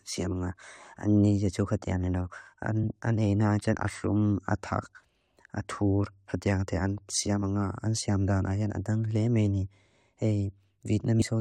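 At 11.19 to 11.22 s, near the very end of the speech, the audio jumps forward: compressed frames were skipped. A few whole frames never reached the output, either missing from the stream or discarded by the decoder as corrupt, so about a tenth of a second of material is lost. At the join the sound lurches ahead.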